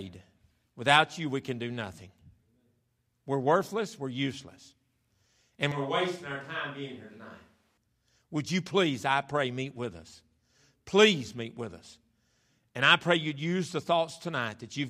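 From 5.72 to 7.77 s, a switch to a distant microphone, likely: the speech turns hollow and roomy, about 5 dB quieter, with thinner lows and a smaller waveform envelope.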